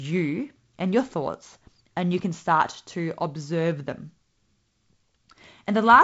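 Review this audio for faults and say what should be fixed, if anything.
Nothing here needs fixing; it's just ordinary G.722 wideband telephone coding, with the top end stopping at about 7.7 kHz the way that format does.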